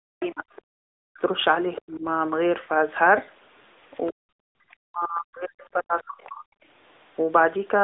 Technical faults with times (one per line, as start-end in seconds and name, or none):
0.00-7.84 AMR narrowband mobile codec
0.00-0.44 speech suppressed in double talk
0.20-0.27 other side's voice leaking through
1.79-2.05 speech suppressed in double talk
4.06-4.12 other side's voice leaking through
4.11-6.43 speech suppressed in double talk